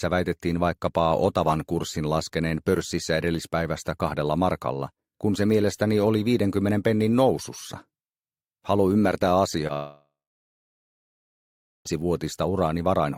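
At 9.67 to 9.71 s a brief smear or wobble passes through the sound: a short concealed packet loss. About 20 ms of audio arrived too late, so the receiver carried the preceding sound forward to bridge the gap and then blended back into the real signal.

Right after, from 9.73 to 11.87 s, the sound turns into a fading buzz or hiss and then about 1.7 s of near-silence before resuming further on with that stretch missing. This is likely a long network dropout, with roughly 2.1 s never delivered.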